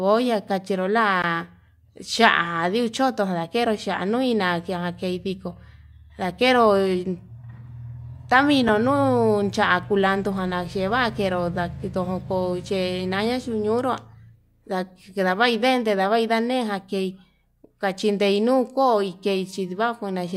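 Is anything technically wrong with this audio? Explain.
Yes, there are two blocks of digital silence in this speech. At 1.22 s, just after "kachero la", a 16 ms run of audio drops out to silence, and at 8.68 s there is a 5 ms gap, which fits a 256-sample buffer that was not filled in time. Each edge cuts with no fade, so the first is heard as a short hole and the second as a tick. That abrupt, unfaded hole sets this apart from a faded dropout or a concealed packet loss.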